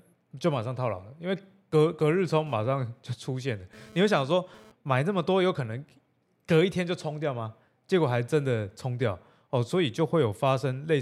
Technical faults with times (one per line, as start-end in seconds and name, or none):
2.47-4.72 GSM phone buzz